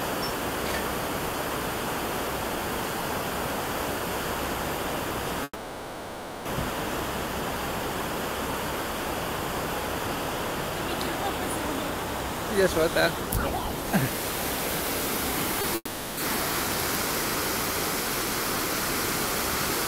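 A long network dropout runs from 5.43 to 6.47 s, with about a second of audio never arriving, likely because the connection stalled. The receiver stretches the last sound into a decaying buzz and hiss to cover the gap, and only a brief near-silence of about 30 ms is left before playback resumes. The material from that second is simply gone.

A short concealed packet loss follows at 15.61 to 15.65 s, where about 20 ms missed the decoder. The receiver papered over it by extending the preceding sound and crossfading back, heard as a quick smear or wobble.

Right after, from 15.75 to 16.19 s, comes a second long network dropout of about 0.42 s, likely from the same kind of stall. Again the last sound is drawn out and fades, a short silence of about 30 ms follows, and the audio returns with that stretch missing.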